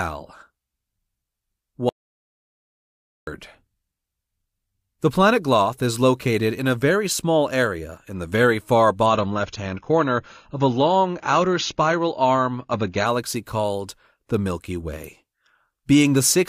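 From 1.89 s to 3.27 s the speech is replaced by an audio dropout to silence lasting about 1.38 s. The gap is silent, with no room tone at all. The input was likely lost while the recorder kept writing silence.

At 9.06 s the quality drops suddenly, with no gap. This is an adaptive stream switching to a lower bitrate. Nothing above 6.9 kHz remains, and the voice turns dull. The change points to a step down from about 96 to 24 kbit/s AAC. Full quality returns at 13.06 s.

At 15.04 s a sharp snap sits on top of the speech. It is an electrical switching spike, very brief and tight. Its likely cause is a nearby switch or static discharge arcing into the audio line.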